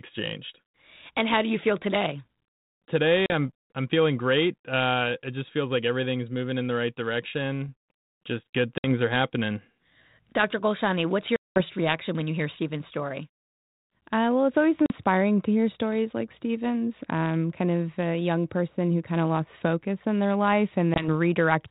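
Packet loss on an ADPCM call hits at 3.26, 8.78, 11.36, 14.86 and 20.94 s, leaving hard-edged silent holes of 40, 60, 200, 40 and 20 ms, the longest fitting around ten dropped packets. Each gap zeroes the sound abruptly, and because the decoder's adaptive predictor and step size lose track of the sender's, the speech resumes with brief, slight distortion before realigning, all over the narrow band of the 32 kbit/s G.726 link.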